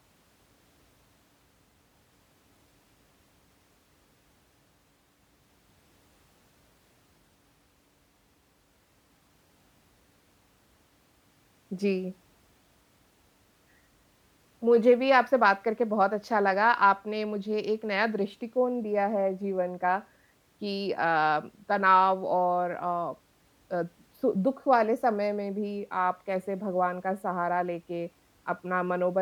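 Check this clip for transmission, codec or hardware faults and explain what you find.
Listening through the speech, nothing stood out as a fault.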